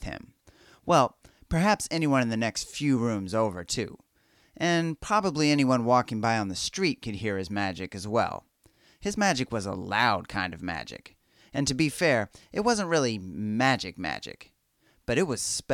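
Nothing in the speech recording points to a technical fault anywhere in the signal.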